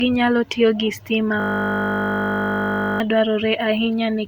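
From 1.4 to 3.0 s the speech gives way to a steady 50 Hz buzz, a system hang loop. The machine or driver froze while the audio hardware kept replaying one 20 ms buffer, about 80 times, so roughly a second and a half of speech is lost.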